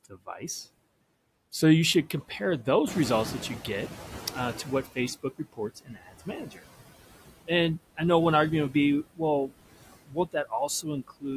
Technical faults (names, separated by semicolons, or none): noise suppressor artifacts; noise suppressor catching up; speech cut by the noise suppressor